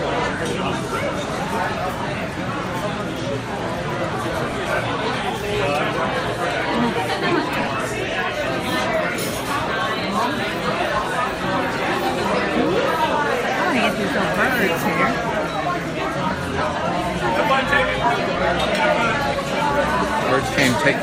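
Three spots have frames out of order: 4.49 to 4.54 s, 7.59 to 7.68 s, and 18.19 to 18.36 s. Each time, two neighbouring chunks got decoded in swapped order, so that stretch plays with its halves exchanged. The blocks grow from about 20 ms to 40 ms to 80 ms, which fits swaps of one, two, then four 20 ms frames. Each one comes across as a brief garbled flutter, and nothing goes missing.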